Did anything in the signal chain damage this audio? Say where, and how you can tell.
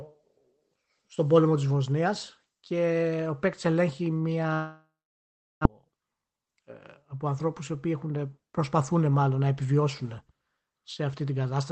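Yes. At 4.53 s, after "και ο παίκτη ελέγχει", a long network dropout, likely packet loss, begins. A fading buzz becomes 0.73 s of silence. Sound resumes at 5.67 s, the lost part gone.

A jitter buffer speed-up runs from 5.75 to 6.47 s, before "ε από ανθρώπους οι". Trimmed pitch periods make speech 9% faster at the same pitch, shedding roughly 70 ms.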